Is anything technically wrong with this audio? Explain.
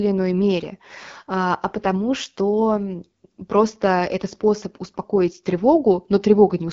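Yes. Throughout the speech, the audio carries the sound of the AMR wideband (HD Voice) codec, and the damage is plainly audible. The codec models the voice as pulses driving a vocal tract filter up to 6.4 kHz and fills the top band with shaped noise, so nothing sits above about 7.4 kHz. The speech comes across rough and raspy, which fits one of the lowest AMR-WB rates, around 8.85 kbit/s.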